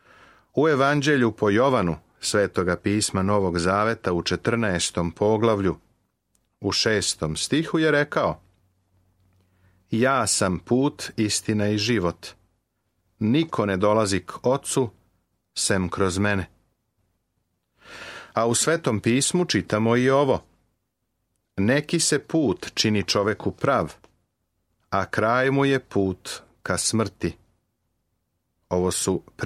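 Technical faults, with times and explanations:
Nothing technical goes wrong anywhere in this one, so there's nothing to list.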